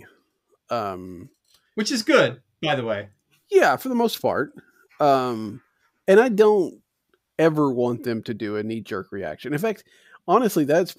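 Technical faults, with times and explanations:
No technical faults can be heard in this speech.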